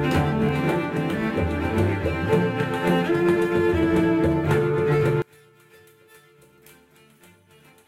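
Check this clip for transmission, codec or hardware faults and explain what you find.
One fault is present, a one channel inverted condition, from 5.22 s to the end of the music. The level falls by about 32 dB and the music turns faint, its centred content almost gone. The likely cause is reversed polarity on one stereo channel, so material common to both channels cancels in a mono sum.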